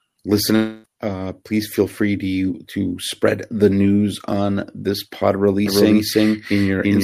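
At 0.55 s the audio breaks off until 0.86 s, a gap of about 0.3 s that sounds like a long network dropout, likely caused by packets failing to arrive. Roughly 280 ms of the original speech is gone. The receiver covers the whole hole by stretching the last sound into a fading buzz, so there is no dead silence. When the signal resumes, it picks up further along, skipping the lost material.

From 5.66 s to the end, a doubled audio track appears, likely from a second, slower capture path mixed in with the main one. A full-band copy of the speech trails the original by roughly a third of a second at about the same loudness. It has no reverberant tail or room colouring, so it reads as a distinct second voice stream rather than an echo, and it starts abruptly.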